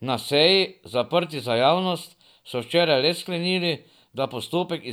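No technical faults can be heard anywhere in the speech recording. Nothing in the audio calls for a time mark or any remark on how it was captured or carried.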